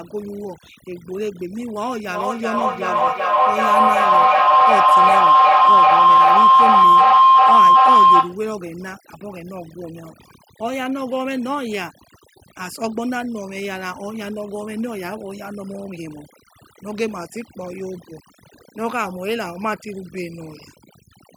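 From the start and through the whole speech clip, overdone noise removal leaves the background almost silent but speckled with twinkling artefacts. A denoiser set too hard is cutting individual frequency bands near its noise estimate, taking quieter speech detail too. Broadband hiss reduction wouldn't make that metallic sparkle.

From 2.07 to 8.47 s a feedback howl builds to about 14 dB above the speech. A microphone-to-loudspeaker loop is gaining on each pass and settling on a tone around 1 kHz, with repeats roughly every 0.4 s. Because it swells rather than decays, it can't be a plain echo.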